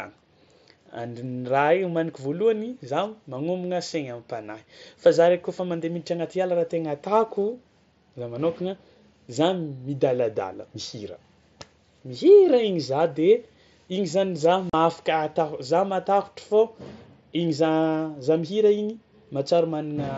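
Unconcealed Bluetooth headset packet loss at 14.70 to 14.74 s: 38 ms of speech was lost between headset and phone and replaced with silence or an idle pattern, a span that fits five lost mSBC frames. The speech cuts out abruptly, leaving a brief hole with hard edges.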